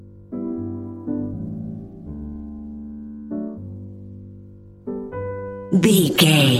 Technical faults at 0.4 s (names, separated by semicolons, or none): none